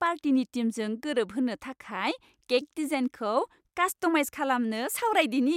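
Nothing in this speech recording stood out as a fault on listening.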